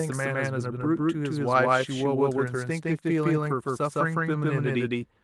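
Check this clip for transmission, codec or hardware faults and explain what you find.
Two faults are audible: a doubled audio track running through the whole clip, and a lost packet rebuilt from error correction just after 3.4 s.

Doubled audio track: A second, full-band copy of the speech trails the original by roughly 150 ms at about the same level. This is likely a second capture path or an out-of-step edit. It gives a flat, slap-like doubling with no room decay.

Lost packet rebuilt from error correction: From 3.45 to 3.51 s, about 40 ms of audio (consistent with two lost packets) was filled from the low-bitrate backup copies carried in the following packets. There is no gap, but the speech turns briefly rougher and noisier.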